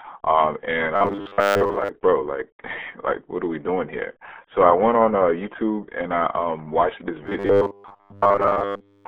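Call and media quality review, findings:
Muffled, gargly speech for the whole clip, with no content above 4 kHz and a narrow telephone-like band of about 250 Hz to 3.4 kHz. Component: RealAudio 14.4 codec. An 8 kbit/s dial-up speech coder discards the upper band and smears the rest.

0.96–1.89 s, ending just before "bro like": rigid metallic buzz at 100 Hz that loosely follows the speech. Likely robotic sound from repeated short buffers. Late packets cause the last 10 ms to be replayed in place of most of the real audio.

7.24 s to the end at 9.07 s, right after "I um watched this": the same 100 Hz robotic buzz. Likely repeated short buffers again. A 10 ms block loops while most of the incoming audio is skipped.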